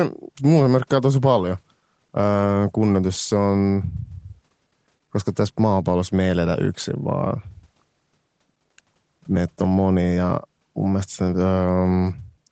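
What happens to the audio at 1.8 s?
Nothing goes wrong at 1.8 s; the speech runs on intact through that moment, carrying only the normal 8 kHz band limit of the call path.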